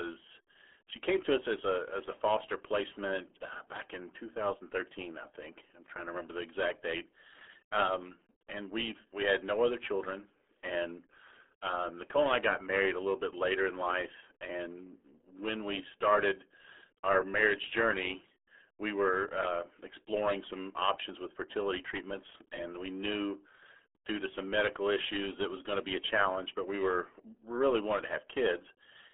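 From start to finish, the speech carries the RealAudio 14.4 codec sound. Nothing reaches above about 3.8 kHz, and energy sits mostly in a telephone-like band from 300 Hz to 3.4 kHz. The heavy coding damage, consistent with an 8 kbit/s dial-up codec, leaves the speech muffled and gargly. On a spectrogram the upper region is empty above a hard ceiling, with smeared, blotchy harmonics below it.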